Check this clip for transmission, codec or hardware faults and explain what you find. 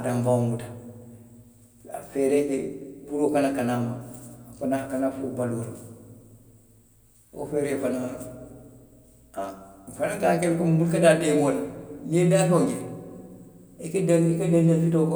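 Nothing wrong can be heard anywhere in this speech recording.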